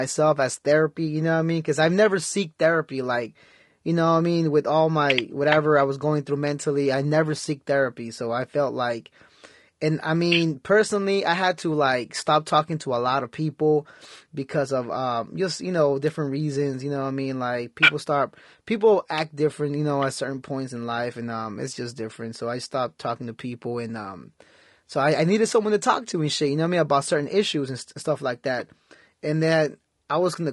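From the start and through the whole clip, the speech carries plainly audible low-delay AAC compression. The likely cause is an AAC-ELD encoder of the kind used in video calls. Its frames are very short, so pitch harmonics are resolved poorly. Too few bits are left for fine detail. The voice sounds rough and grainy. Noise fills the gaps between harmonics. The top band sounds thin and synthetic. The damage fits a bitrate around 32 kbps.

At 16.08 s, just after "um just you know", an electrical switching spike cuts in. It lasts only a couple of milliseconds. It is most likely a nearby switch, motor or static discharge arcing, with the audio line picking up the burst. It sounds like a sharp snap or a tight cluster of clicks laid on top of the speech. The speech underneath carries on unchanged.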